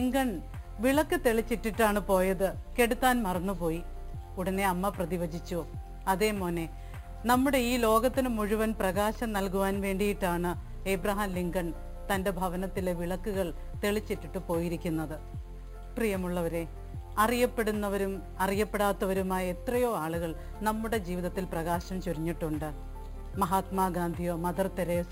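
From start to finish the audio carries imaging from sample-and-hold upsampling. The evidence points to material at a rate near 11 kHz raised to 48 kHz by repeating each sample with no smoothing filter, so mirrored spectrum copies remain. The lowest image spans about 5.5 to 11 kHz, roughly 19 dB below the signal. It is heard as a bright metallic fizz that tracks the loudness. A spectrogram shows inverted reflections above 5.5 kHz, and the waveform shows a stair-stepped shape.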